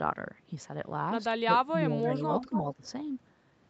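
From 1.66 to 2.24 s the speech dips by up to about 10 dB in patches, likely speech suppressed in double talk, with the canceller ducking its own talker along with the echo while both ends talk. It happens again from 2.46 to 2.86 s. An echo leak shows up at 2.03 to 2.12 s and 2.41 to 2.74 s: a faint copy about 10 dB down, 274 ms late, likely loudspeaker pickup the canceller missed.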